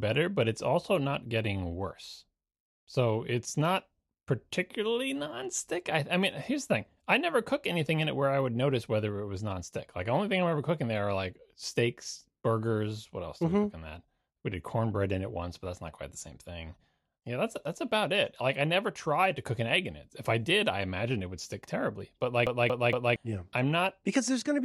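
From 22.46 to 23.16 s the speech catches in a CD stuck on one turn: the same 0.23 s slice plays three times, each jump marked by a brief mute. That even, machine-regular stutter, rather than irregular dropouts, marks a scratched disc throwing the laser back a track.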